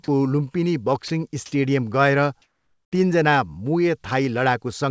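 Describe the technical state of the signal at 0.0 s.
Right at the start, from 0.04 to 0.08 s, the speech briefly gives way to steady, even noise. This is likely sound dropped by the voice detector: it treated the sound as background, and comfort noise filled about 40 ms. Above 8 kHz there is nothing.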